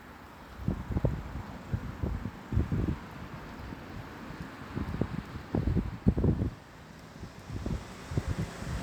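No technical faults can be heard anywhere in this recording of sounds. Nothing in the audio points to a problem in how it was captured, processed or delivered.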